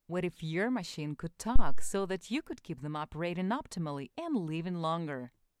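At 1.56 s a phantom power thump appears: supply voltage switched on or off on a live input steps through the coupling capacitors, producing a deep low-frequency thud peaking at about -10 dBFS. It decays in roughly 100 ms, with residual disturbance until 2.0 s.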